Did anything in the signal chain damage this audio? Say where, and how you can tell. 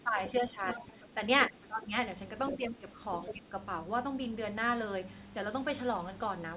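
Yes. Speech suppressed in double talk happens at 0.0–1.17 s, 1.49–1.92 s, 2.56–3.0 s and 3.31–3.55 s, during call processing. The speech dips by about 10 dB, up to about 15 dB near 1.5–1.9 s, likely because the echo canceller couldn't separate the talker from the loudspeaker echo and turned both down.

The other side's voice leaking through comes in at 0.74–0.83 s, 1.43–1.66 s, 2.49–2.56 s and 3.24–3.33 s, about 10 to 15 dB below the speech. It's likely leftover loudspeaker echo the canceller missed. The whole band stops at 4 kHz, which fits a G.711 A-law call path at 64 kbps.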